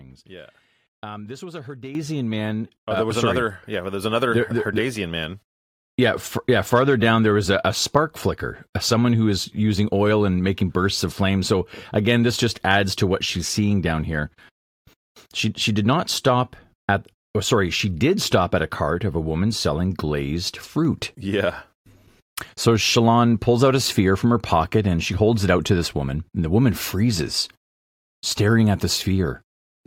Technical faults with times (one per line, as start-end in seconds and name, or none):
1.95 microphone volume stepped up
2.97 microphone volume stepped up